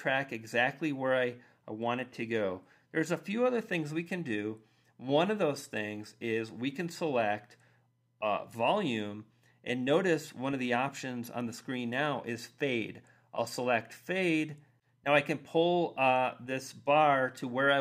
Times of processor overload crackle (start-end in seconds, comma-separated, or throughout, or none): none